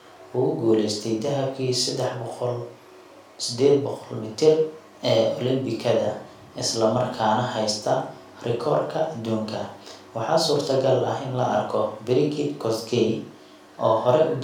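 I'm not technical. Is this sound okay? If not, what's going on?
Yes, it's fine: nothing in this recording jumps out as a problem, so you can relax about it.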